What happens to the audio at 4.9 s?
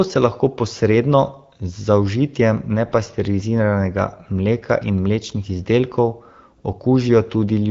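Nothing goes wrong at 4.9 s: the speech carries on intact through that moment, still passing through the AMR wideband (HD Voice) codec at 12.65 kbit/s.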